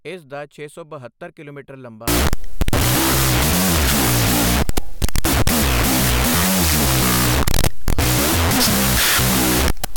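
From 2.08 s to the end, a wrong sample width fault: 16-bit data read as unsigned 8-bit, giving loud noise over buried speech at half speed and lowered pitch.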